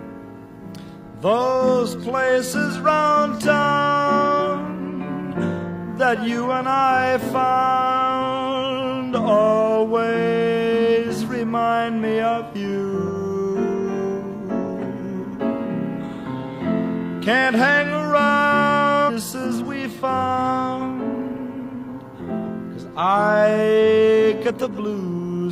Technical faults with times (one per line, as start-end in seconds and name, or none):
19.04-19.10 stream segment skipped